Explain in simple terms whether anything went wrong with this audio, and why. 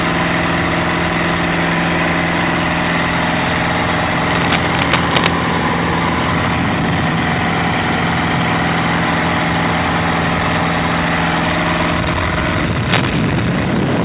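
Cable scratch noise appears twice: from 4.29 to 5.28 s, and again from 12.83 to 13.19 s. Both times a rough, uneven scratching sits on top of the sound, the first burst as loud as the audio itself, the second a little quieter. The likely cause is a worn cable or connector being moved, so its electrical contact flickers rapidly and injects bursts of noise. The audio also travelled through a phone-style call line, which removes everything above 4 kHz.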